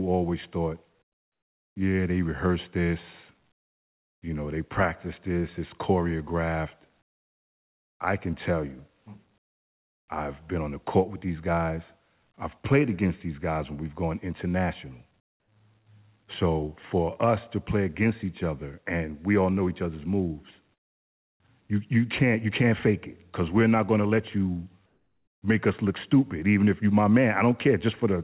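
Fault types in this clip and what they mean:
Comfort noise in place of the background: In seven pauses, the real background drops out. A flat, featureless hiss replaces it, between about 5 and 28 dB quieter. The likely cause is discontinuous transmission: the sender stops sending, and the receiver fills the gap with synthetic noise.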